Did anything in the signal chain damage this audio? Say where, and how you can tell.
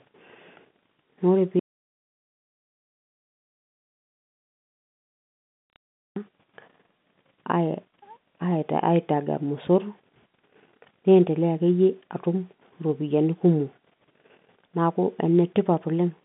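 Yes. From 1.59 s to 6.16 s the speech cuts out mid-flow into dead digital silence, with no room tone, for about 4.6 s. This points to the input stage: the source was most likely disconnected or muted while the recorder kept writing silence.

Bit errors hit at 5.76 s and again between 15.38 s and 15.42 s. These are bit errors on a digital phone line, in the network stage. Flipped bits in the mu-law stream, at a rate well under one percent, jolt single samples on a line whose telephone band runs from 150 Hz to 3.6 kHz.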